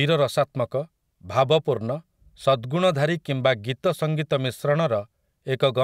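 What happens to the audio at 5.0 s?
Nothing goes wrong at 5.0 s: the speech carries on cleanly through that moment with no dropout, click, distortion or other fault.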